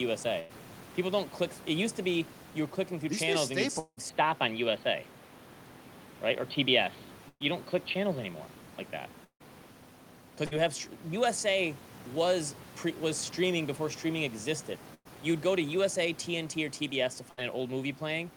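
Short held buzzes and fading hisses break up this speech recording, with the sound after each one resuming a little further on. Five of these are a burst of packet loss: at 0.39–0.51 s, 7.29–7.42 s, 10.46–10.61 s, 14.94–15.07 s (right after "streaming before streaming existed") and 17.31–17.39 s. Each drops about 60 to 120 ms of audio. The receiver stretches and fades the last sound across the hole, and in the 7.29 s and 14.94 s cases it leaves about 40 ms of silence before the audio picks up again. Two longer gaps, at 3.79–3.99 s and 9.24–9.42 s, sound the same way at first but run on: roughly 0.16 to 0.18 s of decaying buzz or hiss, then about 60 ms and 90 ms of silence before the audio returns with that stretch gone. That points to a long network dropout as the likely cause. From 4.09 s to 9.71 s the sound turns dull and boxy, with a change in level of around 5 dB and a new background noise roughly 30 dB under the speech. 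There is no silence at either change, and the fuller tone snaps back at 9.71 s. This is most likely the input switched to a poorer device for those five and a half seconds, something like a headset call profile with a narrower band. Steady room noise sits about 21 dB below the speech throughout.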